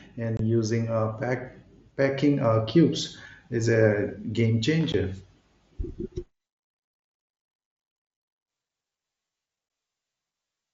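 Speech clip with unconcealed Bluetooth headset packet loss: hard-edged silent holes at 0.37–0.40 s, just before "using uh pack packing", and at 4.92 s and 9.69 s. Nothing fills them, unlike concealed loss, which would smear or repeat the sound. The wideband mSBC link carries the speech up to 8 kHz.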